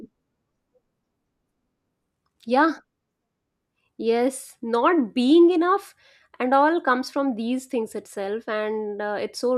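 Nothing in this speech recording stands out as a technical fault at any point, so there's nothing to flag here.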